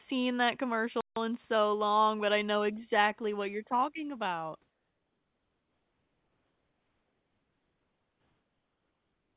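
Speech, with a playback stall from 1.01 to 1.16 s: the sound cuts to silence for about 157 ms and resumes on "in so long but". The likely cause is the player running short of buffered data or its output thread being blocked. From 4.7 s, right after "what you're talking about", to the end, comfort noise replaces the background. The real room sound, sitting about 50 dB below the loudest speech, gives way to a steady, featureless hiss about 4 dB quieter. This likely comes from discontinuous transmission stopping during the pause while the receiver synthesises noise. The whole clip also carries the narrowband character of the call path, with nothing above 4 kHz, which fits G.711 coding.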